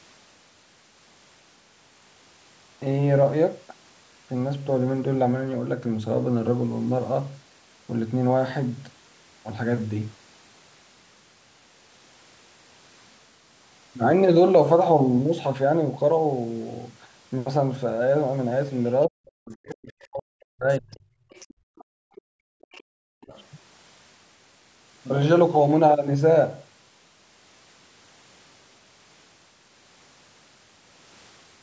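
From 19.07 to 21.04 s the talker's speech sinks and breaks up, for roughly a second and a half in total and by as much as around 40 dB at its deepest. This is speech suppressed in double talk: both sides were likely talking at once, and the echo canceller, unable to tell the talker from the loudspeaker echo, turned everything down.

Faint scraps of a second voice then surface at 20.92–20.96, 21.30–21.84, 22.15–22.22, 22.62–22.83 and 23.32–23.45 s, sitting roughly 25 to 35 dB below the talker. This is the other side's voice leaking through, likely loudspeaker playback that the canceller failed to subtract fully from the microphone.

Between 21.54 and 22.93 s the room tone falls away, about 40 dB down for around a second in all, and returns afterwards. This is background gated by the echo canceller, which clamped the microphone hard while the loudspeaker was active. A brief repeat of the double-talk suppression follows at 23.21–23.33 s, a dip of roughly 25 dB.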